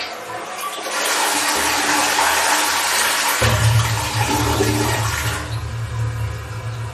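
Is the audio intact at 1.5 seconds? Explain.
No. At 1.5 seconds, as across the whole clip, there's clear damage that's likely from MP3 compression, which fits a bitrate around 40 kbps. Nothing remains above 13.6 kHz, and weak frequency lines flicker on and off between frames, giving a watery, swirly texture.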